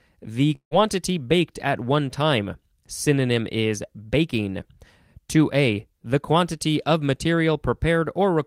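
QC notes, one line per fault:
0.55–0.74 s, long network dropout: the speech breaks off and the last sound is stretched into a fading buzz, about 157 ms filled in all, ending in roughly 100 ms of silence before the speech resumes further on, with about 160 ms of material missing. The likely cause is a gap in incoming audio, during which the receiver's concealment extended what it last had, decayed it to silence, and then skipped ahead without the lost portion.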